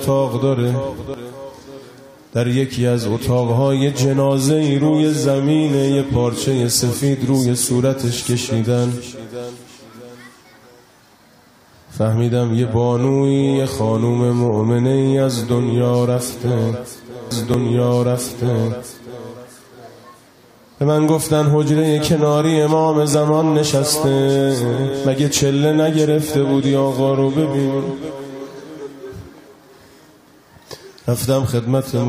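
At 1.14 s the sound jumps ahead. A short stretch, under a tenth of a second, is simply missing. The two sides butt together with no gap. This is most likely a dropped buffer from an overrun, where samples were overwritten before the program read them.

From 17.30 s to 19.27 s a stream segment is repeated. About two seconds of audio play a second time, 1997 ms in all, and a small blip marks the jump back. The player fetched or queued the same segment twice. Inside that stretch, at 17.54 s, another brief skip is heard. The loss is only a few hundredths of a second. It likely comes from the same kind of overrun.

At 23.14 s a third tiny jump occurs. Again only a few hundredths of a second are lost. This points to a likely dropped buffer as well.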